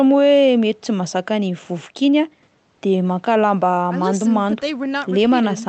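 No technical faults are audible anywhere in the recording.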